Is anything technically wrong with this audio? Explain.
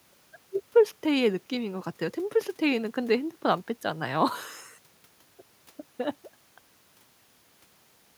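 No, nothing stood out as a technical problem on listening to this speech recording.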